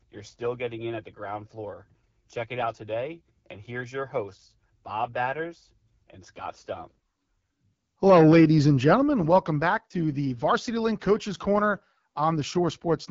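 Throughout, the speech has passed through the AMR wideband (HD Voice) codec at a very low rate, consistent with 8.85 kbit/s, so its pulse-driven vocal model is starved of bits. The result is plainly rough, raspy speech, with noise-filled upper band and nothing above 7.6 kHz.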